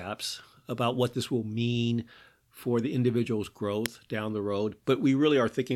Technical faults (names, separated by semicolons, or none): electrical switching spike